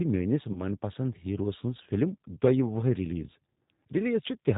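From the start, the speech runs through the G.729 codec. The damage is plainly audible. At 8 kbit/s, each 10 ms frame is rebuilt from a vocal tract filter, a pitch estimate and a few pulses. Nothing above 4 kHz survives, so the sound is dull and narrow. Voiced parts come out slightly rough and synthetic. The result is intelligible, but it clearly sounds like a low-rate phone line.

At 0.53 s there is VoIP packet loss concealed by the speech codec. About 20 ms of audio went missing, which fits two lost 10 ms frames. The decoder filled the gap by repeating its last pitch and filter settings at falling gain. This stretches the sound into a fading buzzy tone or coloured noise. Because each frame depends on the one before, the speech stays weak or distorted until about 0.65 s.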